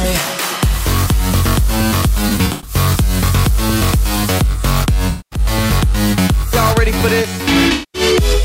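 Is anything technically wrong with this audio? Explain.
Yes. There is AAC frame loss with concealment at three points: 2.29 to 2.75 s, 5.10 to 5.39 s, and 7.73 to 8.02 s. Each time, about 213 ms of coded audio goes missing, which points to roughly ten lost frames. The decoder patches the gaps from the last good spectrum. The result is a brief smeared, noisy, phasey patch. In the first event the losses are scattered over 384 ms, with the longest run about a tenth of a second.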